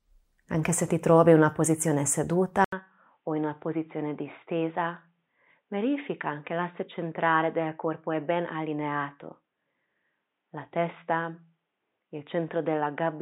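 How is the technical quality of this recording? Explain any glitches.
Quality drops partway through. From 2.64 s to the end, the audio sounds like the input switched to a poorer device: after an 80 ms gap, it turns duller and boxier, nothing above 3.8 kHz, about 5 dB quieter, with a faint new noise floor. A spectrogram shows the top band cut off flat; the waveform shows a brief flatline and smaller amplitude.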